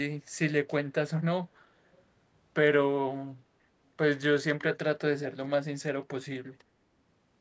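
From 1.93 to 2.02 s, a very faint copy of the speech returns 395 ms late, likely an echo leak from imperfect loudspeaker echo cancelling.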